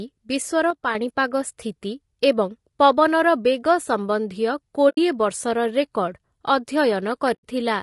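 Throughout, the speech sounds rough and grainy, with a noisy fill between the pitch harmonics and a thin, synthetic top band. This is likely low-delay AAC compression (AAC-ELD). Its short frames resolve harmonics poorly, and the plainly audible damage fits a bitrate around 32 kbps.

From 0.70 to 0.95 s the sound abruptly drops by about 6 dB and then returns. The likely cause is one channel dropping out. After the stereo pair is summed to mono, losing one side halves the shared content.

At 4.89 to 4.98 s, and again at 7.33 to 7.45 s, the sound fades briefly into silence and back. This is AAC frame loss with muting. Spectra missing for about 80 ms and then 100 ms were zeroed, which fits roughly four and five lost frames. The overlapping windows soften the edges of each gap.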